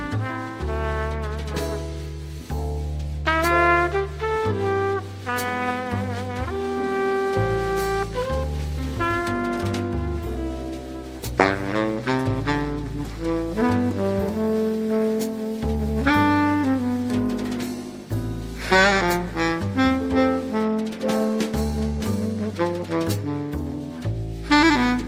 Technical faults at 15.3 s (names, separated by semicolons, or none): none